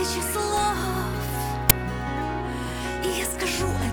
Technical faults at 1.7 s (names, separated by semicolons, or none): uninitialised buffer